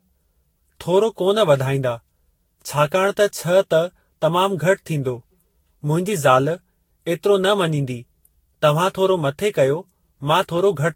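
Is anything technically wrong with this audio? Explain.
Yes, there is one fault, generation loss, throughout the speech. The sound is swirly, hollow and smeared, with blurred consonant attacks, likely from repeated re-encoding, around seven passes fitting a Vorbis codec near 60 kbit/s. Each pass re-quantises on a shifted frame grid, compounding noise and spectral holes. A spectrogram shows patchy gaps and nothing above 16.6 kHz; the waveform shows softened transients.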